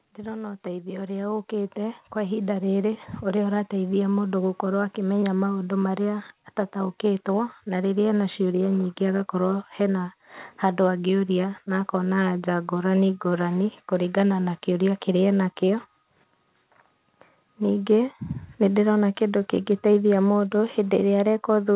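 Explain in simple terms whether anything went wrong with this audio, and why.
Yes, one thing went wrong near the start. From 0.15 to 2.73 seconds you can hear automatic gain rising. The call's volume control judged the speech too quiet and slowly turned it up. Because it raises everything at once, the voice and the background noise swell together over those two and a half seconds. The level settles just before the words "ũrĩa ũrateithia mũndũ gũkorwo". The sound also has the muffled, phone-like tone of a call line, with nothing above 4 kHz.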